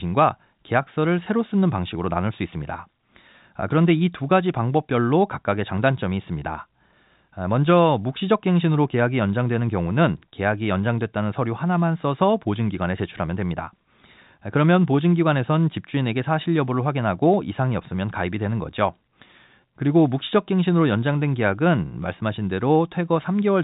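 There are no technical faults in this speech clip.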